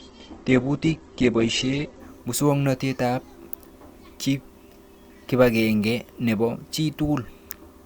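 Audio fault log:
0.0 to 2.0 s, adaptive stream starting at a low bitrate: the player opened on a lean version of the stream to begin playing quickly, then switched to a richer one once it had gauged the connection. For those first two seconds the speech has nothing above 8.1 kHz and carries heavier codec smearing, which points to a low-rate Opus encode of around 12 kbit/s. At 2.0 s the treble and clarity return abruptly, with no gap in the audio.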